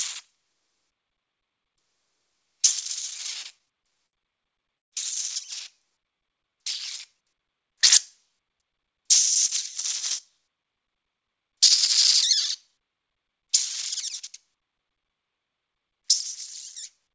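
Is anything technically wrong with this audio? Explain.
Yes, there are three kinds of jitter buffer trouble here. The audio also comes through a call codec with nothing above 8 kHz, which fits G.722 at 64 kbps.

Repeated stalls (stutter) hit from 3.02 to 4.15 s and again from 4.55 to 4.94 s. Packets arrived late, so the buffer kept running dry and the receiver stretched the last sound to cover. The first stretch has 14 short stalls totalling 190 ms, none longer than 66 ms. The second has just 4, but they fill 167 ms and one lasts 143 ms, so it drags.

The jitter buffer slow-down runs from 5.88 to 6.65 s. The buffer was low, so the receiver repeated tiny pitch-period chunks to rebuild a reserve, adding about 94 ms. The sound plays at 89% speed with unchanged pitch and feels drawn out.

The jitter buffer speed-up comes at 10.38 to 11.51 s. Too much audio had piled up, so the receiver trimmed short pieces, around 150 ms in total. 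Playback runs at 114% with pitch held steady, and that passage sounds hurried.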